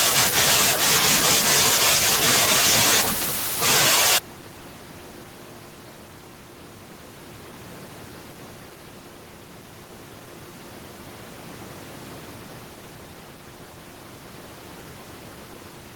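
There are no technical faults to describe in time order; the only background is the room's own noise, sitting about 23 dB below the speech.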